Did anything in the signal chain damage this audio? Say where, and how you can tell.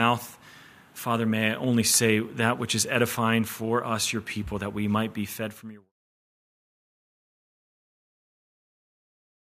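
No, nothing damaged it.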